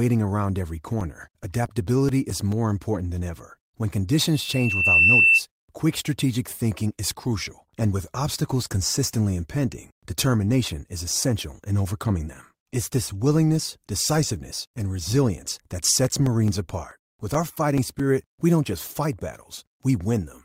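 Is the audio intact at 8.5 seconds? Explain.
Yes, at 8.5 seconds the speech plays through intact, with no dropout, glitch or other fault at that moment.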